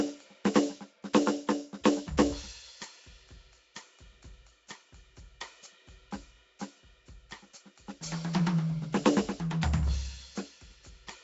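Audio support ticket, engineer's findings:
Rough, hissy halo over the whole music clip. Smeared, underwater quality. Likely Nellymoser compression, consistent with roughly 32 kbps. Fixed two bits per sample across short blocks. Weak bands get no bits and are noise-filled.

Pre-echo at 1.84 s. Short hiss just before a sharp attack, spread over about 14 ms. Attack sounds softened. Transform codec spreads quantisation noise across the block. Noise sized for the loud onset leaks into the quiet gap before it.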